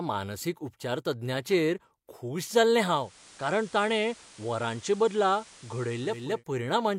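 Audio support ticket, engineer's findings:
Digital radio blending to analogue, 2.85 to 6.44 s, after "मानसीक उपचारतज्ञाचेर खूश जाल्लें". Hybrid receiver loses digital, 440 ms cross-fade to FM and back. Hiss roughly 25 dB under signal, level down about 1 dB.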